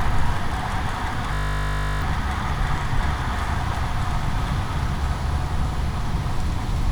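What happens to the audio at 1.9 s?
At 1.9 s the playback is inside a system hang loop running from 1.34 to 2.02 s. The computer or its audio driver stalled, and the sound hardware kept replaying the same 20 ms stretch of its ring buffer dozens of times. Because the loop is so short, it repeats 50 times a second and fuses into a steady 50 Hz buzz. Roughly 0.7 s of the real audio never comes through.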